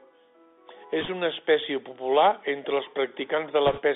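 Bluetooth CVSD headset codec damage runs through this entire speech clip. The audio sits in a narrow telephone band of roughly 300 Hz to 3.6 kHz, with nothing above that. Its plainly audible grainy hiss and scratchy sibilants fit a 64 kbit/s CVSD stream, where each sample is a single up-or-down bit with an adaptive step size that can't keep pace with loud, bright sounds. Bit errors on a Bluetooth voice link appear twice. The first, from 1.01 to 1.08 s, is a short rushing crackle just before "una espècie popular entre" and suggests an error rate of around 2 percent. The second, from 3.67 to 3.81 s, is longer and rougher, pointing to roughly 4 percent. Because every CVSD bit carries the same small weight and the decoder recovers quickly, the corrupted bits come through as noisy crackling rather than sharp clicks.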